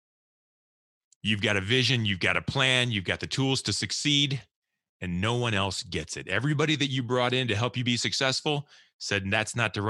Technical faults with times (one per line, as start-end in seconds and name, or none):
none